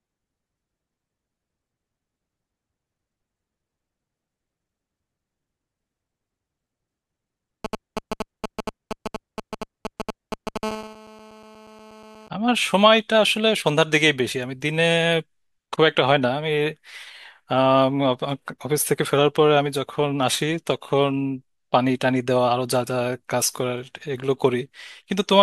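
A galloping dit-dit-dit of short raspy buzzes cuts across the speech from 7.65 s to 10.58 s, nearly as loud as the talker. These are GSM signalling bursts. A 2G handset close by is exchanging brief groups of radio bursts with the network, as it does when setting up a call or message. The audio circuitry rectifies each group into a short buzz pulsing at about 217 Hz.

Straight after, from 10.63 s to 12.28 s, the pattern turns into a continuous harsh, rasping drone at about 217 Hz, full of harmonics and about 16 dB below the speech. This is GSM phone buzz. The handset has moved into a call and now transmits its time-slot bursts steadily, 217 times a second. The circuit demodulates that pulse train into an unbroken tone, so it runs on regardless of what the speech is doing.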